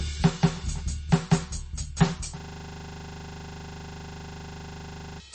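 Throughout the music, the sound is watery and swirly with nothing above 8.3 kHz, likely from heavy MP3 compression at a low bitrate, around 32 kbps. From the start to 2.18 s there is a doubled audio track: a second, equally loud copy trails by roughly 200 ms, likely from a slower duplicate path. It is already running at the opening and cuts off abruptly. From 2.4 s to 5.2 s, a system hang loop repeats one 40 ms piece about 70 times, producing a rigid 25 Hz buzz and losing roughly three seconds of music.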